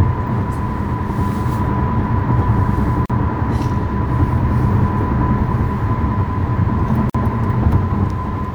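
At 3.06 s and 7.10 s, about four seconds apart, the sound drops out for 39 ms, then 49 ms. These are gaps at a join of encoded pieces, where untrimmed encoder padding left silence. The sound resumes where it stopped.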